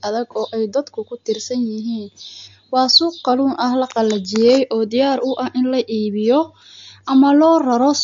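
An encoder likely starved of bits, consistent with MP3 compression at around 48 kbps, runs through the whole speech clip. It cuts everything above 7.2 kHz and drops weak spectral detail frame by frame, leaving dull, watery speech with swirling, plainly audible artefacts.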